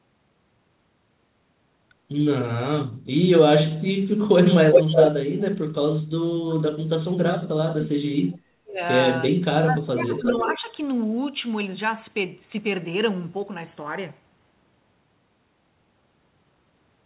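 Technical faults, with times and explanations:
4.72–5.11 s and 10.19–10.57 s, echo leak: a delayed copy of the speech returns, about 380 ms late in the first stretch and about 350 ms late in the second. It sits about 5 dB above the direct speech the first time and about 5 dB below it the second time. The likely cause is a far-end loudspeaker feeding its microphone, with that side's echo canceller letting part of the signal back down the line.
6.47–8.82 s and 9.31–10.7 s, speech suppressed in double talk: the main speech sinks in pieces for about 2 s in the first span, down by roughly 40 dB at worst, and for about 1 s in the second, down by roughly 20 dB. The second span overlaps the later echo. This is likely an echo canceller that could not separate near speech from returning echo while both were present, so it attenuated everything together.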